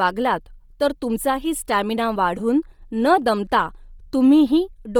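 Across the whole speech clip, the signal has likely passed through Bluetooth LC3 compression at a low bitrate, fitting a setting around 32 kbps with 10 ms frames. Starved of bits, the encoder discards much of the upper spectrum and patches those bands with synthetic noise. The damage is heavy and continuous: the voice takes on a breathy, grainy edge, and the top end sounds hissy rather than detailed.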